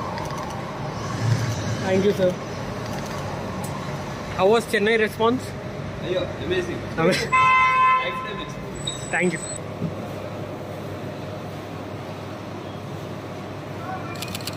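No technical faults are audible anywhere in the recording.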